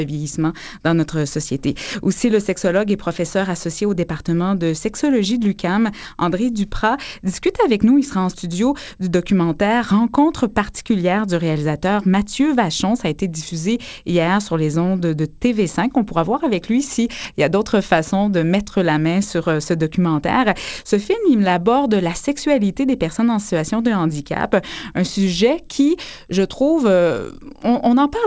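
No technical faults can be heard anywhere in the audio. It has come through a call path whose content stops at about 8 kHz, which fits a wideband call codec such as G.722 at 64 kbps.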